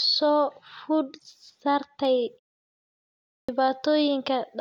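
Clipped start after a pause, at 3.38 to 3.49 s: after roughly 1.1 s of silence, the output device has let itself idle and is not ready when speech resumes, so the first 105 ms are lost. The word begins abruptly, missing its opening sounds, as if cut in mid-attack.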